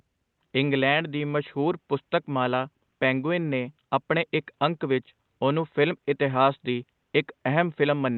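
Nothing in the speech jumps out as a technical fault, and the faint room noise in the background sits about 54 dB below it, so it's just the sound of the space the microphone was in.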